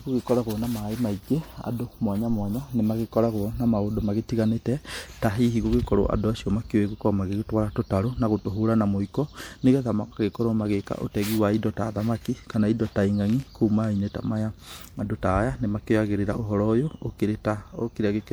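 From start to finish the speech sounds swirly, hollow and smeared, with blurred attacks. That's likely generation loss: roughly three passes through MP3 around 96 kbit/s, each stacking fresh quantisation damage.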